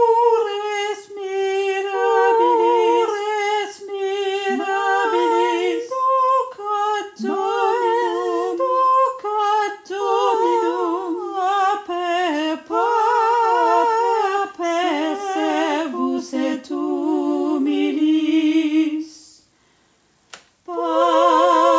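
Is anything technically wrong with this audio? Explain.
No, nothing technically wrong can be heard in this audio, so there is no fault to report.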